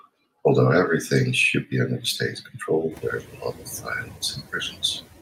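Noise suppressor artifacts run through the whole speech clip. The suppressor cuts bands it judges to be steady noise by about 12 dB, frame by frame. The background sinks in the pauses and swells back under the speech, and this pumping is clearest after the room noise rises by about 24 dB at around 3 s, where it settles about 20 dB below the speech. On a spectrogram, the noise floor darkens in the gaps and fills in beneath each speech burst.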